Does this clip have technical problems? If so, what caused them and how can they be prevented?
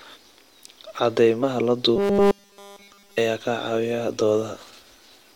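Yes. At 1.42 s there is a brief disturbance from damaged data in a compressed stream: corrupted bytes made the decoder misread a frame and resync at the next header, unlike a dropout's clean silence. Prevent it with checksummed, reliable transport and intact storage.

From 1.96 s to 3.18 s, just before "ayaa ka", the speech becomes a rigid metallic buzz at 200 Hz, likely robotic sound from repeated short buffers, with a 5 ms slice looped while new audio arrived late. Unlike a codec warble, its pitch stays fixed. Prevent it with larger buffers and timely delivery.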